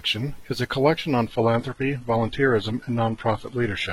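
Adaptive stream at a lower bitrate, from 1.27 s to the end of this speech clip: the quality drops abruptly with no gap, as the stream switches down. Treble vanishes above about 11.8 kHz, and codec artefacts rise in a way that fits a low-rate HE-AAC version.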